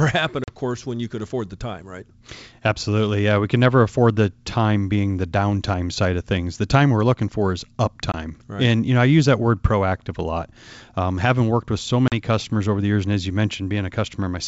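Packet loss on an ADPCM call breaks this speech recording three times: at 0.44 to 0.49 s, at 8.12 to 8.15 s, and at 12.08 to 12.14 s, with gaps of 40 ms, 20 ms and 40 ms. Those lengths point to one or two packets dropped each time. The missing audio is filled with silence, leaving sharp-edged holes. The receiving decoder's predictor and step size also lose track of the sender's, so the speech comes back with brief, slight distortion, before settling over the next few tens of milliseconds.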